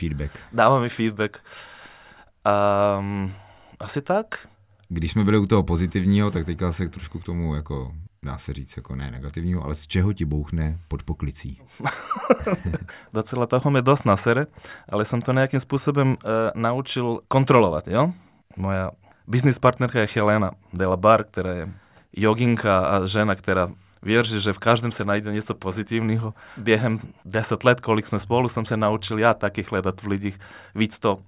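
No technical faults can be heard anywhere in the recording. Nothing in the speech calls for a timestamp or a cause.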